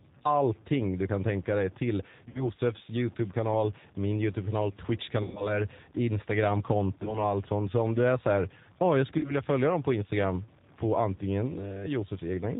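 Distortion rides on this speech recording from start to finish, with a gritty noise floor that fills the pauses instead of silence; the likely cause is a data bit stuck at one value, corrupting about half the samples by a fixed step. Over that, the whole band stops near 4 kHz and the voice has a rough, slightly synthetic edge, the plainly audible signature of the G.729 codec (the G.729A variant, consistent with an 8 kbit/s stream), which rebuilds speech from a filter and a few pulses per frame. Four dropouts show VoIP packet loss concealed by the speech codec: at 2.29 to 2.45 s after "kan tänka dig till", about 60 ms missing; at 5.23 to 5.59 s, about 120 ms; at 7.03 to 7.22 s before "allt sånt", about 20 ms; and at 9.19 to 9.34 s between "här ja oh jag" and "följa dem på", about 40 ms. Each gap is bridged by a stretched, fading continuation of the last sound, and the voice stays weak and smeared briefly after the stream resumes.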